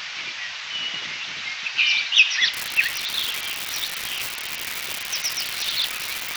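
From 2.54 s to the end there's an unreliable data bit: one data line is flaky, so its bit flips in random samples, each flip a same-sized spike around -11 dBFS. You hear it as a steady crackly fizz that carries straight through the quiet gaps.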